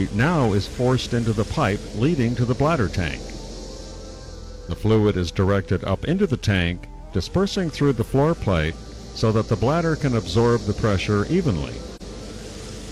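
At 11.96 s, about a second before the end, there is an AAC frame loss with muting lasting until 12.02 s. The decoder had no data for what sounds like a single frame, about 43 ms of audio, so it filled that span with silence. The overlapping transform windows fade the sound down and back up, leaving a brief soft-edged dropout. A spectrogram shows a narrow vertical blank band across all frequencies, and the waveform shows tapered amplitude dipping to near silence.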